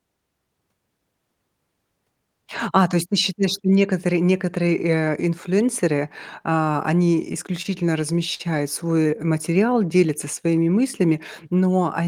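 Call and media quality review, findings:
Repeated stalls (stutter), 7.15–7.67 s, right after "инфлюенсеры а": four short holds, longest 25 ms, about 52 ms filled, roughly 10% of the span. Jitter buffer repeatedly ran dry on late packets and the receiver extended the last audio. Spectrogram shows frozen, smeared harmonic bands; nothing lost.

Short stall from a late packet, 8.34–8.41 s: one sound held about 50 ms too long while the receiver waited, then resumed from the same point. Jitter buffer underrun; the delay rises by 50 ms. Waveform shows a repeated cycle with a slight level dip.

Jitter buffer slow-down, 8.96–10.64 s: playback runs at 93% speed with pitch unchanged, adding 122 ms while the buffer rebuilds its reserve through repeated pitch periods and pause fragments. Spectrogram shows stretched formant segments at constant pitch, sometimes with a faint warble.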